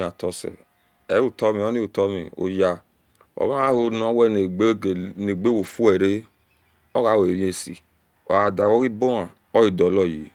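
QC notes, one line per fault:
3.61–3.99 s, 5.37–5.75 s, 8.31–8.81 s: lost packet rebuilt from error correction. Brief rough, noisy stretches with no gap, as the decoder played low-bitrate copies carried in the following packets.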